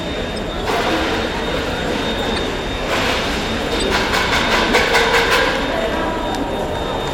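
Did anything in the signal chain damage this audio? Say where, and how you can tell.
Yes. Brief chirp-like noise bursts cut into the sound at 2.36–2.38 s, 3.80–3.83 s and 5.74 s, the middle one loudest. This is a corrupt frame decoded at the codec stage: flipped bits in a frame or two were played anyway, misplacing energy in frequency.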